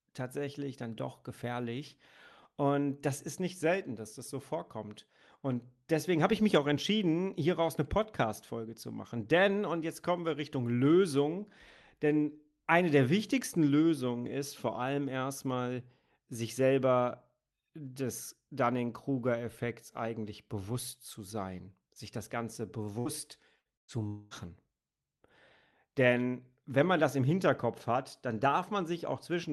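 Speech, carried over a call path whose sound stops near 12 kHz, which fits a super-wideband call codec. Bursts of packet loss occur at 22.99, 23.59 and 23.77 s. In each, the receiver holds the last sound, fading it, then jumps ahead, losing 60, 60 and 120 ms. The third fill is mostly silent. From 24.07 to 24.34 s, the last sound is held and faded for about 0.24 s, and then the speech resumes further on, with that stretch gone, likely a long network dropout.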